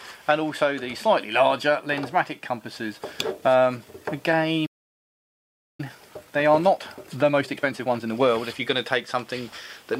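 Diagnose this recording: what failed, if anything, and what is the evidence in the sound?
A playback stall, likely from the player's buffer running dry or its output thread being blocked, stopped the audio at the playback stage. At 4.66 s the sound cuts off mid-flow and stays silent for about 1.1 s before resuming at 5.80 s.

After recovering, the player ran a time-compressed catch-up to work off its backlog, removing small slices and cross-fading the joins. From 5.80 s to 8.80 s the sound runs at 1.25 times normal speed with its pitch unchanged, so it comes across as hurried rather than higher.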